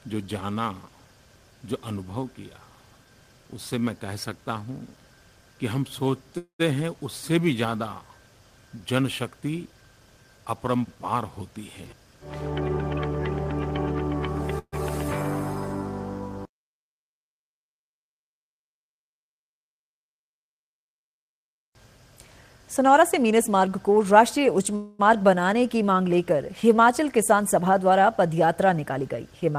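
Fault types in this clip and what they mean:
Call audio freeze: Three brief stalls where the last sound carries on as a fading buzz or hiss, lasting about 0.22, 0.14 and 0.23 s; the first two trail into silence. Likely, packets were delayed and the jitter buffer ran dry, so the audio then resumes without loss.
Jitter buffer speed-up: Three stretches run faster while keeping the same pitch, running about 7%, 4% and 6% fast, so the first and last sound hurried. The receiver trimmed tiny pitch-period slices repeatedly to shed surplus buffered delay, removing roughly a fifth, a seventh and a fourteenth of a second.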